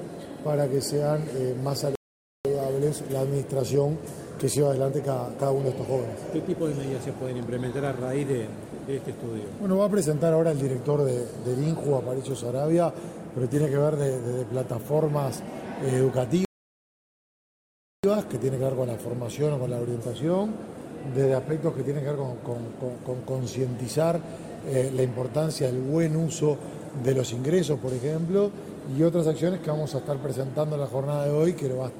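Rebuffering stalls at 1.95 s and 16.45 s: playback drained its downloaded audio and froze, giving about 0.5 s and then about 1.6 s of silence. Each time the sound resumes exactly where it stopped, so nothing is missing but time is added.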